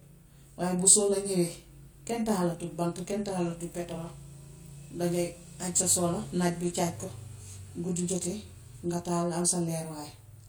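Speech throughout the clip carries channel delay (comb filtering): one channel runs roughly 20 ms late and the two sum to mono, carving evenly spaced fixed notches starting near 20 Hz. The resulting rough, slightly doubled sound stays constant, unlike room reverberation, which adds a decaying tail.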